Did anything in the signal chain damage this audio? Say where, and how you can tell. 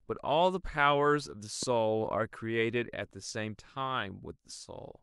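Yes. A single loud pop from 1.63 to 1.65 s rises a few decibels above the speech, which carries on unbroken beneath it. That points to a voltage pulse likely entering in the analogue wiring, such as a plug or static discharge. A dropout or buffer glitch would instead interrupt the audio itself.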